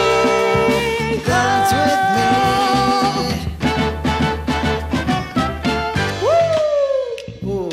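From 3.06 s to 6.54 s faint hiss rises under the sound, at unchanged level. This is digital radio blending to analogue: the receiver lost the digital stream, cross-faded in 153 ms to the same station on FM, then blended back.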